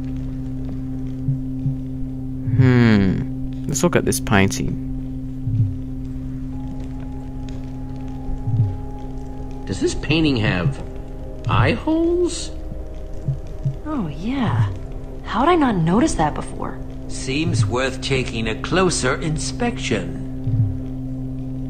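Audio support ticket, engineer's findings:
Engineer's findings: no audio faults found in the ticketed clip.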